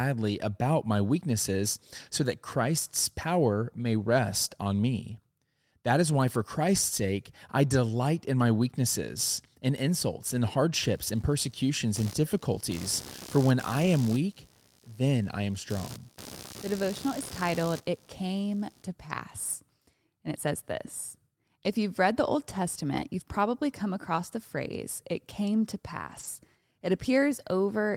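Speech, with two kinds of fault. Computer activity noise: from 10.83 to 18.83 s, just after "weaknesses in insults in", changing processor or peripheral load disturbs the audio circuit's shared ground. The result is a buzzing, scratching layer pulsing at around 70 times a second, roughly 20 dB below the speech, that follows the machine rather than the talker. Lost packets rebuilt from error correction: at 13.81 to 13.87 s, at 22.93 to 23.03 s before "you've probably come across", and at 26.07 to 26.25 s after "phrase it came to", packets were lost, and the decoder filled each hole with the low-bitrate copy carried in the following packet. No gap is heard; instead, stretches of 40, 60 and 100 ms turn briefly rougher and noisier, which fits runs of two, three and five lost 20 ms packets.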